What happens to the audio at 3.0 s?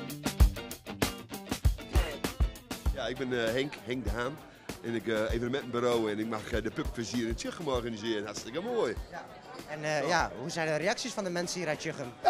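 Nothing goes wrong at 3.0 s; the audio plays through that moment intact, with no dropout, click, distortion or other fault.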